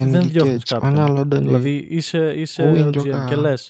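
No faults can be heard in this speech, which carries the band limit near 8 kHz and the light coding texture expected from an Opus call path at a moderate bitrate.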